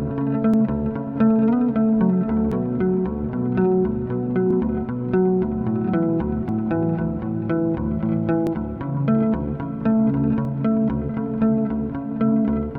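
Tiny clicks or skips in the sound at 0.54, 2.52, 4.51, 6.49, 8.47 and 10.45 s, one about every 2 s, point to overlap between stream segments: the player trims a few milliseconds at each boundary, so the waveform jumps.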